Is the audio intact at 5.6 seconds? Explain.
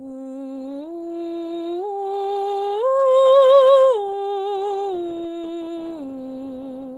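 Yes, at 5.6 seconds the music plays through cleanly, with no dropout, click, distortion or other fault.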